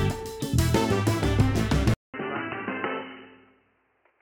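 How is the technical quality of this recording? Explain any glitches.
The recording has one clear fault. At 1.94 s the sound cuts out for 200 ms, then resumes about 10 dB quieter, boxy, with nothing above 3 kHz and a faint new hiss. The input was likely switched to a poorer device. The gap, level drop and changed noise set it apart from a simple bandwidth loss, which would only dull the sound. It lasts to the end.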